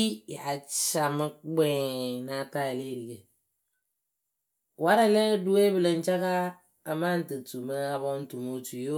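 No audible technical faults.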